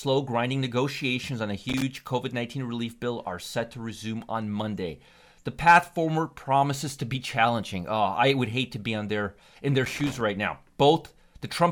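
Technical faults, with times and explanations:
1.69 to 1.82 s and 9.85 to 10.2 s, loose connector crackle: two short, irregular bursts of scratchy crackle over the speech. It sounds like a worn or dirty contact flickering between touching and not, chopping the signal on and off.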